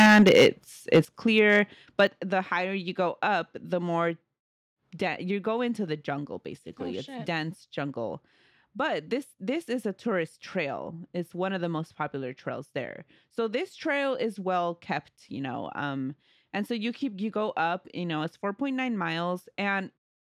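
From 0.0 to 0.48 s the loudest syllables crackle with flattened tops, likely microphone overload pushing peaks about 10 dB past the converter's limit. At 0.06 s a sudden drop of about 2 dB is likely the microphone volume stepped down by the call software. Clipping returns at 0.93–1.0 s, and the level then falls about 8 dB at 1.05 s. Lighter clipping follows at 1.38–1.56 s and 1.99–2.05 s, with another step down of about 6 dB at 2.07 s.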